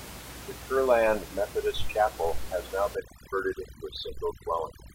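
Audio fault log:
2.95–4.95 s, overdone noise removal: from just after "has now" to the end of the clip, the background drops and breaks up into twinkling specks. A noise reduction stage is acting far too hard against room noise that sits only about 16 dB below the speech. It shuts down individual frequency bands whenever they come close to its noise estimate, so quieter parts of the speech vanish along with the noise.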